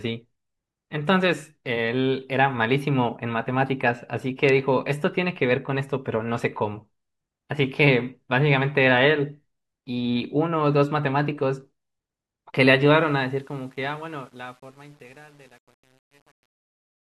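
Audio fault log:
12.95–17.09 s, truncation distortion on a fade: as the speech fades out from about 13 s, the level stage keeps roughly 9 bits with no dither, so from 13.64 s the waveform collapses into coarse steps. It turns gritty, unlike a clean fade, which thins evenly without grain.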